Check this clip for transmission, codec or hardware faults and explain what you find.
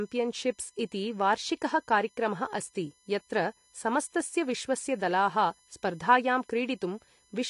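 Two faults run through the whole of the speech: a steady electrical whine and lossy-codec damage.

USB whine sits under the entire clip, around 35 dB below the speech. USB bus current, drawn in 1 ms frames, leaks through power or ground and produces a 1 kHz tone with harmonics, strongest at 11 kHz. A spectrogram shows fixed horizontal lines at 1 kHz multiples.

AAC compression damage is plainly audible throughout. The speech sounds dull and smeared, with a warbling, fizzy edge on sibilants and sustained sounds. Nothing survives above 11 kHz, so a spectrogram shows a hard ceiling there. This is likely AAC-LC coding at a low bitrate, around 32 kbps.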